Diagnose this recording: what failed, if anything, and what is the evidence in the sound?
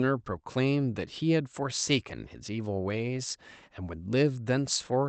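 Nothing failed: the speech passes through a call path with the top end rolled off around 8 kHz, which points to an Opus encode at a wideband setting, and no stage from capture to playback leaves any audible defect.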